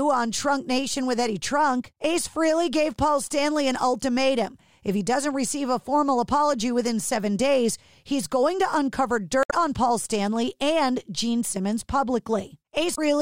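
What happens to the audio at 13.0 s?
A short glitch cuts into the speech from about 12.92 to 12.99 s, lasting roughly 70 ms, just before the clip ends. It comes from damaged data in a compressed stream. Part of the encoded data at that point is corrupt, so the decoder misreads those frames, loses its place in the bitstream and has to hunt for the next valid frame header. That brief decoding failure produces the glitch in place of clean audio.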